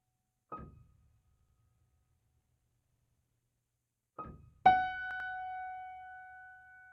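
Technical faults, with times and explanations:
1.39–1.58 s, 2.97–3.16 s, 5.11–5.29 s: repeated buffer. A 93 ms slice of music replays twice with hard joins, so you hear a rhythmic stutter rather than a silent dropout.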